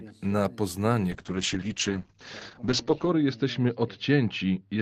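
At 1.12 s there's a call bitrate drop that lasts to the end of the clip. The bandwidth estimate fell, so the encoder went from about 40 kbps down to 8 kbps and sat at that floor for roughly 2 s. At that rate Opus codes much more coarsely and narrows the audio band from 20 kHz to 8 kHz. The speech turns muffled and watery, and it never recovers before the clip ends.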